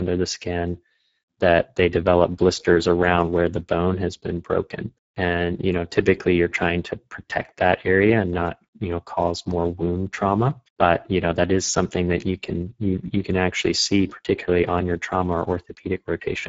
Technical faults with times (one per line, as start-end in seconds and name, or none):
0.00-16.49 Speex codec